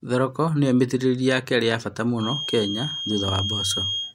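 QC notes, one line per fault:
2.15–4.15 s, feedback whistle: a thin, steady tone at 3.2 kHz enters partway through the speech and continues to the end of the clip, sitting only a few dB below the speech and swelling and fading slowly in level without building up. The likely cause is the loudspeaker-to-microphone loop sitting right at the edge of feedback, where this one frequency keeps recirculating and sustaining itself but the loop gain stays just short of the point where it would grow into a howl.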